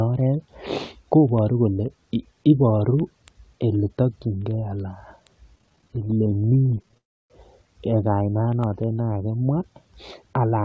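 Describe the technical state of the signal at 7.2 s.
At 7.2 s the speech sits inside a call audio freeze lasting from 6.97 to 7.32 s. The last sound is carried on briefly, then about 0.3 s of silence follows. Held-up packets likely emptied the jitter buffer. Nothing is lost; the audio resumes about 0.32 s later.

Word clock ticks run through this moment too, from 0.15 s to the end. A receiver clock off by roughly 200 parts per million misreads samples as the clocks slip. About ten sharp ticks a second result, each one sample dropped or repeated.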